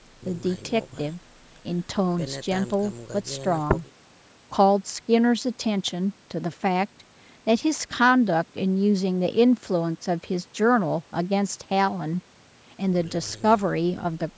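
No technical faults occur at any point in this speech clip, so there is nothing to describe in time order.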